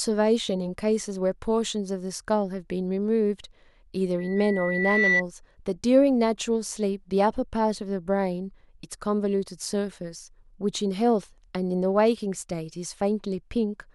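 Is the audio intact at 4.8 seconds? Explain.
No. At 4.8 seconds a loudspeaker feedback squeal is sounding, running from 4.18 to 5.22 s. A single piercing tone at 2 kHz swells over roughly a second until it sits a few decibels above the speech. It comes from a microphone picking up the loudspeaker it feeds: at 2 kHz the gain around that loop exceeds one, so the tone keeps reinforcing itself and grows until the amplifier limits it or the loop is broken.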